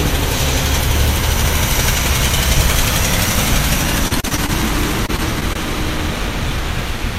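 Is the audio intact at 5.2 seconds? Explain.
No. From 5.06 to 5.57 s, repeated packet loss causes four dropouts, the longest about 21 ms. Each gap is patched by stretching the preceding sound, about 71 ms in total, so the passage turns choppy, with small pieces missing.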